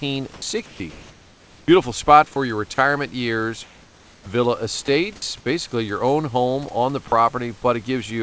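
Sound dropped by the voice detector comes first, at 0.34 to 0.42 s and 0.66 to 0.80 s. The sender's detector likely took quiet speech for background and stopped sending, so comfort noise briefly covers the gap and speech is clipped until sending resumes. Comfort noise in place of the background follows at 0.90 to 1.68 s and 3.64 to 4.26 s. During these pauses transmission likely halted, and the receiver filled the silence with synthetic noise, so the real room background turns flat and featureless and about 2 dB quieter. The voice-detector drops return at 4.86 to 4.88 s, 5.16 to 5.22 s and 7.08 to 7.12 s, each a short bite of speech swapped for steady noise.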